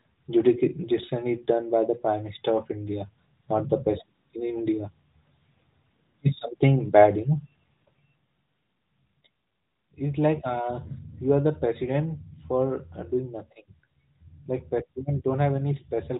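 Speech recording; no technical faults can be heard.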